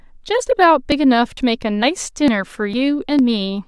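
Speech with audio missing between chunks: skips at 0.47, 0.92, 1.37, 1.83, 2.28, 2.74 and 3.19 s, each dropping roughly 50 ms, likely lost during half-second chunk handoffs.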